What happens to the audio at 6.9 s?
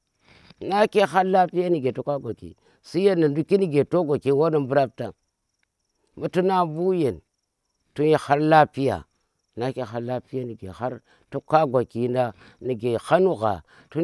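Nothing goes wrong at 6.9 s: the audio is intact there, with no dropout, click, distortion or other fault.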